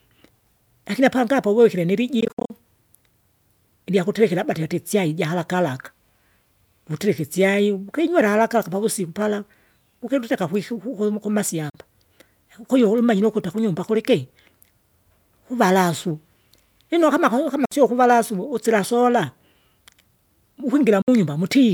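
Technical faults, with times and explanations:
2.20–2.50 s, Bluetooth dropout: likely late packets to the headphones, discarded in several bursts after "apangi apo uwikire", leaving about 174 ms of scattered silent gaps, the longest 58 ms, with the speech resuming further on.
11.70–11.75 s, Bluetooth dropout: packets likely missed their delivery window after "ukiluteka kwiku kuku", so the output cuts to silence for about 44 ms, then speech resumes with nothing caught up.
17.65–17.72 s, Bluetooth dropout: likely undelivered packets after "lino kama kau" produce a 58 ms hole, and the speech picks up as though it had kept playing.
21.02–21.08 s, Bluetooth dropout: packets likely arrived too late and were dropped, so the speech falls silent for 58 ms, and the missing stretch is skipped rather than delayed.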